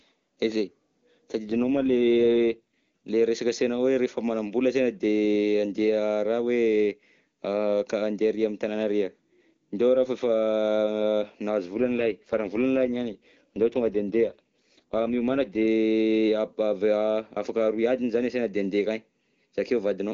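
An AMR rate drop hits at 1.49 to 2.59 s and again at 11.74 to 15.65 s. The speech turns rough and synthetic, fitting a fall from 23.85 to 8.85 kbit/s, then recovers.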